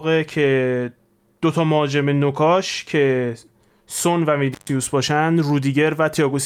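Speech that drops out abruptly at 4.52 s with crackle at both edges, gone for about 130 ms before returning by 4.7 s: an intermittent contact, a loose cable or plug briefly opening the signal path.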